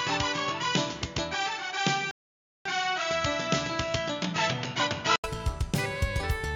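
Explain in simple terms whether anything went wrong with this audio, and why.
From the start until 5.24 seconds, the recording was likely coming from a worse microphone, a fault called an input switched to a poorer device. That device can't pick up the highest sounds, so the audio sounds duller and more muffled than it should. It also adds a faint hiss of its own, though the loudness stays about the same. At 5.24 seconds there is a brief gap of about 80 milliseconds, and then the sound becomes clearer.

At 2.11 seconds the player ran out of downloaded audio and had to wait for more, which is called a rebuffering stall. The sound drops to silence until 2.66 seconds, then picks up exactly where it left off. Nothing is missing, but the pause adds about half a second of dead air to the playback.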